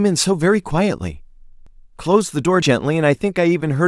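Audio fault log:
0.71 s, 1.67 s, 2.62 s, audio missing between chunks: at each point the speech skips forward by roughly 40 ms, with the two sides butted together and no gap of silence, so a small jump is heard. The regular spacing of about one second likely comes from 1.0 s processing chunks dropping audio at each handover. A waveform shows an abrupt step discontinuity at each join; a spectrogram shows a thin vertical broadband line with formant tracks jumping across it.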